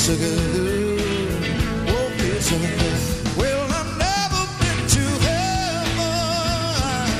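From start to finish the clip carries crude rate conversion. Samples were picked by nearest neighbour with no filter, and the pattern of dropped samples fits a change from 48 kHz to 44.1 kHz. The repeating timing error sits at roughly a tenth of the signal's level, folding shifted, inharmonic copies into the audio as a gritty fizz that rises with loud and high material. Unlike hiss, it vanishes in quiet passages, and unlike codec warble, it doesn't swirl or smear.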